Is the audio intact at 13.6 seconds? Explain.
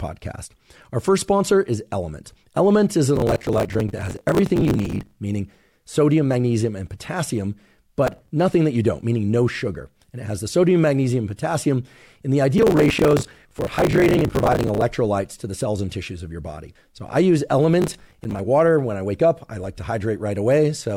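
No, 13.6 seconds sits right in the middle of a stretch of processor overload crackle running from about 12.58 to 14.82 s. The processor couldn't keep up with its small audio buffers, around 10 ms each, and missed roughly a hundred deadlines over that stretch. Each miss repeated a scrap of old audio with hard edges, so a gritty, tearing crackle rides on the speech there until the load eases.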